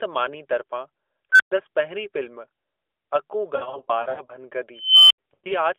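A speech recording over a narrowband mobile line, audibly cut off around 300 Hz and 3.5 kHz, which fits AMR narrowband at its 12.2 kbps mode, carries two kinds of fault. An unstable filter twice produces a tone that swells and clips before dropping to silence. From 1.32 to 1.52 s, a tone near 1.5 kHz builds in about 75 ms, followed by 120 ms of silence. From 4.78 to 5.18 s, a tone near 3 kHz grows more slowly, over about 0.32 s, then cuts out for 80 ms. The runaway growth ending in dead silence separates this from feedback howl, which settles at a steady level. Lost AMR speech frames appear from 3.56 to 4.32 s, where 340 ms of audio is missing in patches spread over 720 ms, consistent with about 17 dropped 20 ms frames, and the longest run is 80 ms. They appear again from 5.34 to 5.52 s, where 120 ms is lost across 160 ms, with a 100 ms run. Unlike hard packet gaps, the decoder smears the last sound and fades it, leaving drawn-out, warbling dips that return rough.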